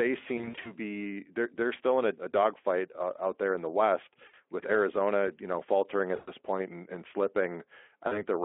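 Brief buzzy, smeared stretches with a fading tail break into the speech at 0.37–0.72 s, 2.32–2.35 s, 4.27–4.34 s, 6.15–6.32 s and 8.07–8.22 s. The first sounds choppy, as about 160 ms of gaps are scattered across 280 ms. This is VoIP packet loss concealed by the speech codec. The Speex decoder, whose narrow telephone-band sound points to a light setting, fills each gap by repeating its last pitch and filter with falling gain, and the sound stays weak briefly after packets resume.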